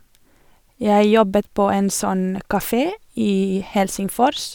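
At 1.78 s there is a single sharp tick in the speech. This is a bit error spike. One bit in the digital data flipped, so the sample value jumped by a power of two and then snapped straight back. The tick is so brief that it fits two corrupted samples. It peaks at about -25 dBFS. Its energy is spread across the whole spectrum, and it bears no relation to the surrounding sound.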